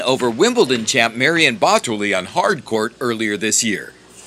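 A short piece of audio with one clear fault: from 1.83 to 2.75 s everything runs about 6.2% slow and drops roughly a semitone (111 cents), then snaps back. That's likely a drift correction step, where clock-matching software briefly changed the playback rate to rebalance its buffer.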